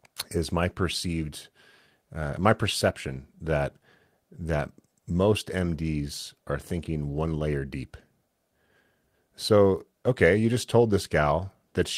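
A speech recording with nothing technically wrong to point at anywhere in it, so there are no times or causes to give.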